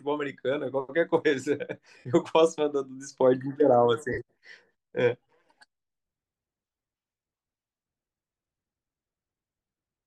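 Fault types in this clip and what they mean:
Lost LE Audio frames: Bluetooth LE Audio frames dropped, and the LC3 decoder filled each gap by replaying the last spectrum with randomised signs. This gives brief noisy smears in the speech at 1.98–2.05 s and 4.13–4.19 s, plus scattered dropouts of about 15 ms or less across 6.72–6.84 s.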